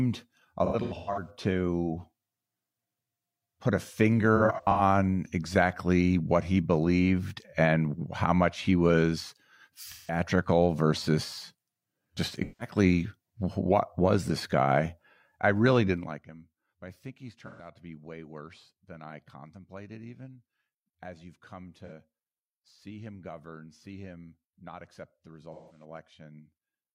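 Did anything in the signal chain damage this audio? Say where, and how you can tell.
Yes, at the codec stage: AAC frame loss with concealment at 0.65–1.30, 4.36–4.81 (after "put a"), 9.88–10.22, 12.43–12.75, 17.46–17.68, 21.85–21.92 and 25.53–25.84 s. The decoder rebuilt missing frames of roughly 43 ms each from earlier spectra, producing smeared, phasey patches rather than the hard silence of a plain dropout.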